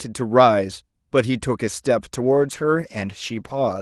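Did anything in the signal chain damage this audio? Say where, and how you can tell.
Yes. A call bitrate drop at the codec stage: from 2.15 s to the end, speech turns coarse and muffled, consistent with Opus falling from about 32 to 14 kbps. Unlike packet loss, there are no gaps or clicks.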